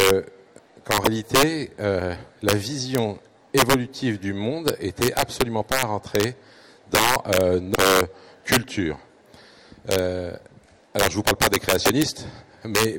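Integer overflow runs through the whole clip. The level sits about 11 dB past full scale, and the small fraction of peaks over the limit wrap to the opposite sign instead of being capped. Each one gives a violent crack. On the waveform these show as instant full-range jumps from top rail to bottom rail, and on the spectrogram as thin broadband vertical streaks.

Damaged data in a compressed stream appears at 1.02–1.07 s, 7.72–7.78 s and 11.82–11.87 s. Each time the decoder misreads corrupted frames and loses sync while hunting for the next header, producing a brief chirp, squawk, click or short hole. The spots last about 50, 58 and 50 ms.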